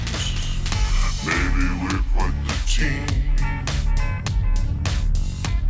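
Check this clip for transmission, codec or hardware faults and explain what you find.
One fault runs through the whole clip: a wrong sample rate. From start to finish the audio sounds slowed and lowered, dragging at about 0.73 times its proper speed and sitting about 5.5 semitones flat. Speed and pitch have dropped together by the same ratio, so the samples are being played out more slowly than they were captured, with no rate conversion in between. The ratio fits material recorded at 22 kHz being played back at 16 kHz.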